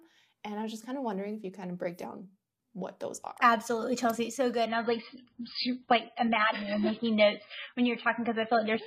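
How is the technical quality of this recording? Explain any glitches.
The recording degrades partway through. From 4.66 s to the end, an adaptive stream at a lower bitrate takes over: the connection slowed, so a much lighter encoding played. Everything above 5 kHz vanishes and codec smearing rises. This fits a drop from about 128 to 16 kbit/s MP3. Unlike a dropout, there is no gap, only an abrupt quality switch.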